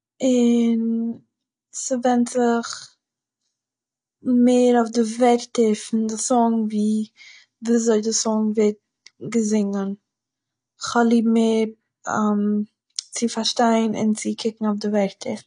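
Throughout the speech, everything above 10.1 kHz is gone, leaving a flat, hard ceiling across the spectrogram. The dull, smeared, warbling texture points to AAC compression, likely AAC-LC at a low bitrate near 32 kbps, quantising the spectrum coarsely and discarding the top band.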